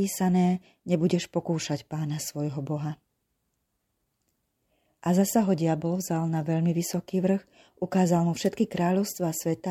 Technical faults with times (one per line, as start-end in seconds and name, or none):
8.44-8.48 wireless microphone noise hit